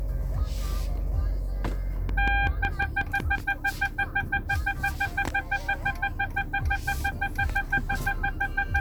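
From 2.09 to 3.39 s a train of clicks cuts across the sound: about seven near-identical pulses at a steady 5.43 per second, standing roughly 10 dB above the surrounding audio, so they are heard as a regular ticking. The likely cause is electrical interference from nearby equipment or a faulty connection or power supply. On a waveform they show as evenly spaced sharp spikes; a spectrogram shows thin vertical lines spanning the full frequency range at equal intervals.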